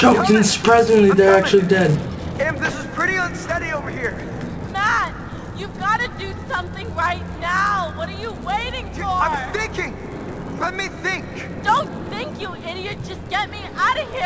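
Throughout, a resampler restarted on every 10 ms block glitches at each edge, producing a 100 Hz buzz under the sound and 100 Hz-spaced spectrogram lines.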